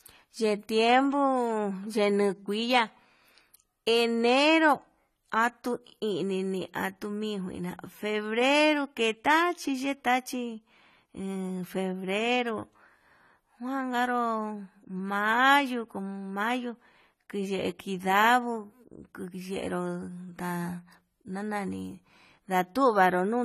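Throughout the speech, AAC compression is likely: dull, smeared sound fitting a low 32 kbps bitrate, with a spectrogram showing nothing above 14 kHz.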